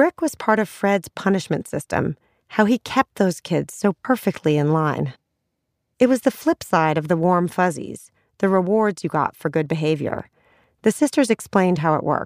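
Nothing in the speech here stands out as a technical fault, so there's nothing to point to along the way.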